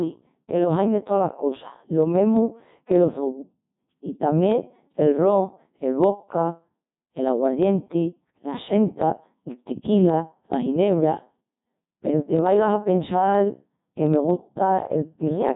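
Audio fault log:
Throughout, Codec 2 vocoder: the speech sounds robotic and buzzy, with heavy damage and nothing above 3.8 kHz. The decoder rebuilds the voice from sine waves using only pitch, voicing, energy and envelope, which fits a very low rate near 1.2 kbit/s.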